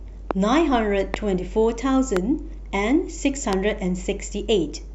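Four sharp, single pops cut through the speech at 0.31, 1.14, 2.17 and 3.53 s, each lasting about 20 ms and jumping well above the level of the talking, with the third slightly softer than the others. The speech continues unbroken underneath each one. This is a loud pop, likely a brief voltage spike from a switch, static discharge or driver glitch, added on top of the signal and then shaped into a short thump by the circuitry that follows.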